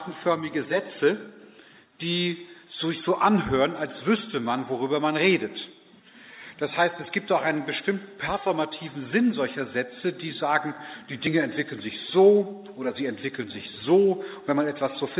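Nothing stood out on listening; the audio comes across as a typical narrowband call, with the expected absence of content above about 4 kHz.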